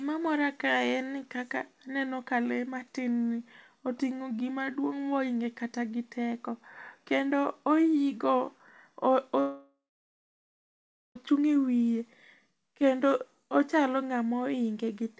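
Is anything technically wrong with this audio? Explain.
Yes. From 9.40 to 11.17 s there is a long network dropout, likely from packets no longer arriving, so about 1.76 s of speech is lost. The receiver stretches the last sound into a fading buzz, then about 1.33 s of near-silence follows before speech resumes beyond the gap.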